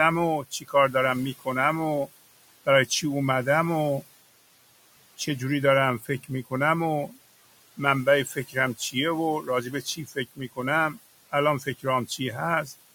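A noise suppressor runs throughout this speech recording, pulling the room noise down by about 18 dB frame by frame, so the background pumps between phrases. The same suppressor also produces speech cut by the noise suppressor, misreading parts of the talker as noise and dipping them by about 12 to 15 dB. This happens at 0.43–0.95 s, 6.0–6.52 s, 7.77–8.95 s, 9.42–10.58 s and 11.32–12.2 s, each time leaving about 150 to 400 milliseconds of swallowed syllables and endings. The room noise underneath, about 18 dB below the speech, belongs to the original recording.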